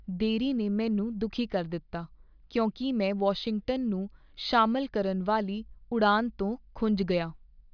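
Nothing in this speech recording sounds like a technical fault, so there's nothing to flag here.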